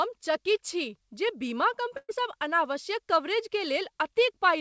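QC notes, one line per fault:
1.97–2.12 s, burst of packet loss: about 120 ms of speech is lost. The receiver extends the last sound for about 116 ms, turning it down as the gap goes on, then leaves about 30 ms of silence before the audio resumes further on.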